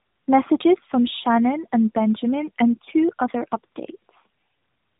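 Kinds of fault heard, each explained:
Tandem speech coding: the speech passed through two AMR-NB coders in a row, joined by a 64 kbit/s G.711 mu-law link, so each coder re-encoded the previous one's losses. It sounds rough, muffled and warbly throughout, with nothing above about 3.8 kHz.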